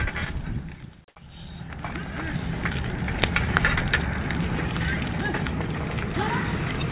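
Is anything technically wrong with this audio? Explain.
Yes, there are two brief gaps.

Onset clipped by the voice detector: at 1.14 to 1.16 s the sound starts abruptly, with the first 20 ms of its soft beginning missing and comfort noise heard instead. The sender's voice detector likely reacted late when sound resumed, so those opening moments were never transmitted.

Sound dropped by the voice detector: at 6.14 to 6.16 s, 20 ms of the sound gives way to steady background noise before returning. This is likely the detector briefly mistaking the sound for background, halting transmission while the receiver filled the gap with comfort noise. The call path's band limit, with nothing above 4 kHz, fits a telephone-band codec.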